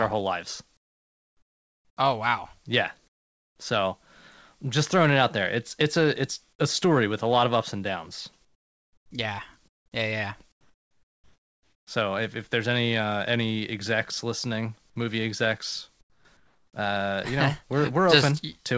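Comfort noise replaces the background at 0.77–1.97 s (after "our whole lives"), 3.08–3.59, 8.45–9.11, 9.68–9.92, 10.52–11.87 (after "yeah yeah"), 16.01–16.25 and 16.37–16.73 s (before "uh you know"). In each pause the real room sound gives way to a flat, featureless hiss, about 6 to 21 dB quieter, likely because discontinuous transmission stopped sending during silence.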